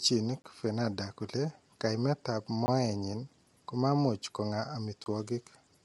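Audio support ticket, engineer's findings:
Grainy, rough speech throughout, noise between harmonics, nothing above 11.6 kHz. Likely low-delay AAC compression (AAC-ELD) at a low bitrate, roughly 32 kbps by ear.

Three 20 ms blocks of digital silence at 0.42, 2.66 and 5.04 s. Probably the output buffer going unfilled, so zeros get played.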